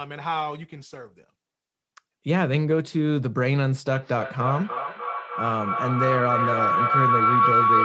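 From 3.93 s to the end, a feedback howl builds: a tone near 1 kHz, with the loop repeating roughly every 300 ms, peaking about 5 dB above the speech. Unlike an echo, whose repeats fade, each pass round the microphone-to-loudspeaker loop adds level, so the howl keeps growing.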